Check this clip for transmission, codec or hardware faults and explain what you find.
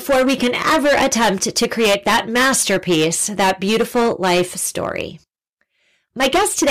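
One fault is present: hard clipping, running through the whole clip. From start to finish, the speech peaks are cut flat. Some stage is overdriven by about 17 dB, so roughly one sample in seven hits its ceiling. The squared-off tops add harmonics high in the spectrum. Every loud syllable comes through as a harsh fuzz.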